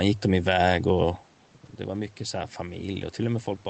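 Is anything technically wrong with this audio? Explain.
Yes. From 1.88 s to the end of the speech there is automatic gain rising. The level reaching the microphone drops by about 10 dB, and the gain control responds by slowly increasing its gain instead of correcting at once. The voice and the room noise swell up together over nearly two seconds, so the background rises along with the talker. This differs from the level change near 1 s, where the talker simply moved relative to the microphone.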